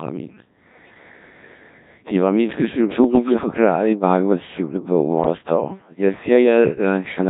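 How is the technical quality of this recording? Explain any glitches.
Quality is poor: the whole recording is heavily vocoded speech, with two short bursts of corruption on top.

Codec 2 vocoder, throughout: the speech has that robotic, buzzy character you get when only pitch, voicing, level and a rough spectral envelope survive and the decoder rebuilds the voice from sine waves. The original waveform is gone, so breath, texture and natural resonance are smeared flat. The damage is heavy and fits Codec 2 at about 1.3 kbit/s.

Bit errors on digital voice radio, at 3.04 to 3.34 s and 5.24 to 5.38 s: with a bit error rate of a few percent, corrupted parameters reach a decoder where every bit matters. The voice suddenly jumps in pitch and level and its tone colour shifts, breaking into warbly, bleepy gibberish. The first burst is longer, consistent with several consecutive frames getting hit. 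The second sounds like a single bad frame.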